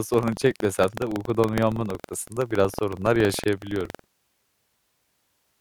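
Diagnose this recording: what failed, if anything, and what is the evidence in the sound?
Buffer tearing at the driver: writer and reader cross each period, splicing in older audio and giving the speech a 21.5 Hz rattle, consistent with 2048-sample buffers.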